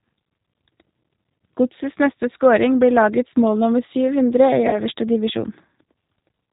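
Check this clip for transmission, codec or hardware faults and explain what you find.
Two faults are present in this speech recording.

Throughout, G.729 codec damage is plainly audible. Speech rebuilt from a pitch predictor and sparse pulses sounds rough and synthetic, consistent with 8 kbit/s. A spectrogram shows nothing above 4 kHz.

From 4.69 to 4.83 s, there is VoIP packet loss concealed by the speech codec. About 40 ms of audio, which points to two lost packets, was extrapolated from the last pitch and filter and faded out. The waveform shows a decaying envelope, and the spectrogram shows smeared, repeating harmonics.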